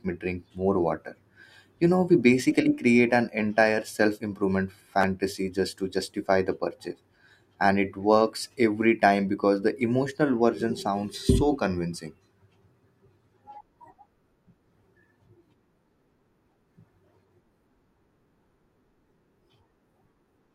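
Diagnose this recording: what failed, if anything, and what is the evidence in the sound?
A repeated buffer fault at the driver/buffer stage shows up from 5.01 to 5.04 s, just before "just to justify the". A tiny slice of audio plays three times in a row with hard joins, heard as a brief buzz-like stutter rather than a clean word. The repeating segment is about 10.7 ms long, which fits a 512-sample buffer. Fresh data missed its deadline, so the device replayed the last buffer twice and about 20 ms of audio was lost.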